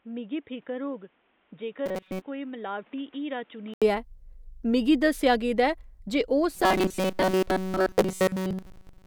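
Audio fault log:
0.0–3.82 s, input switched to a poorer device: the sound is dull and boxy, with a level roughly 10 dB lower, and its own background noise sitting roughly 30 dB under the signal. At 3.82 s an 80 ms gap precedes fuller, clearer sound, likely a switch back to the main microphone.
1.86–2.22 s and 6.55–9.07 s, robotic sound from repeated short buffers: the sound turns into a stiff metallic buzz at 188 Hz while still loosely tracking the speech. Most of the real audio is being skipped, likely because a chunk of about 5.3 ms keeps getting looped when fresh data arrives late.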